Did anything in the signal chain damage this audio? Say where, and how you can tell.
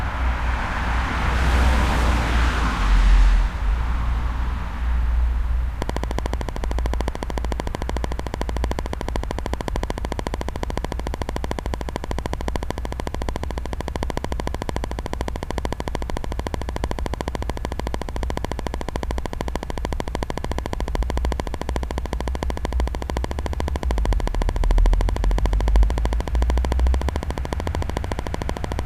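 Yes: a train of clicks runs from 5.82 s to 28.8 s, evenly spaced at 13.5 per second, about 15 dB above the sound. This is likely interference coupling into the analogue wiring.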